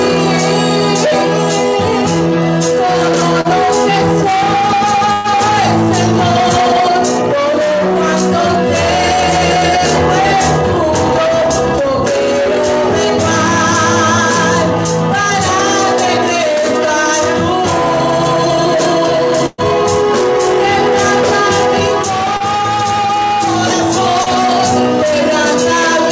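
At 3.41 to 3.48 s there is a short concealed packet loss. About 30 ms of audio never arrived in time, and the receiver covered it with roughly 37 ms of invented continuation, extending the preceding sound and then crossfading back. It comes across as a brief smear or wobble. Only about 30 ms is skipped, far less than in the longer dropouts.

From 5.13 to 5.27 s, and again from 19.46 to 19.61 s, each event is a burst of packet loss. Around 120 ms went missing in a row, and the receiver stretched the last sound over roughly 115 to 120 ms while letting it fade. It never drops fully to silence. Voiced material turns into a held, decaying buzz and anything noisier into a dwindling hiss. When the audio resumes, a chunk of it is gone, which a short concealment does not do on this scale.

The short concealed packet loss returns at 22.37 to 22.43 s and at 24.23 to 24.29 s. Each replaces about 30 ms with a roughly 30 ms patch and sounds like the same quick wobble heard at 3.41 s, over quickly. 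Throughout the clip the call path cuts everything above 8 kHz, which fits a G.722 link at 64 kbps.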